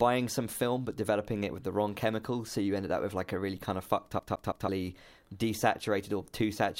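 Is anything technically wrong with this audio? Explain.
Yes. Right after "really kind of fucked", from 4.19 to 4.68 s, the speech hits a CD stuck on one turn: a scratch keeps knocking the laser back one track, so the same 164 ms slice replays three times. It sounds like a fast, even stutter. The waveform shows identical repeating blocks separated by brief silent gaps.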